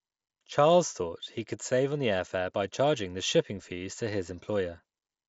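Nothing technically wrong can be heard in this speech recording. It comes through a Bluetooth mSBC headset codec, so the audio stops at about 7.7 kHz and carries the light graininess of that wideband link.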